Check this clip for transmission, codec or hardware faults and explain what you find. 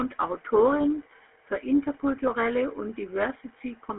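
One fault runs through the whole clip: GSM full-rate codec damage. The vocal tract is modelled and driven by sparse pulses, which fits the 13 kbps full-rate mode. The speech has a plainly buzzy, gravelly roughness, band-limited to 250 Hz–3.5 kHz with nothing above 3.8 kHz.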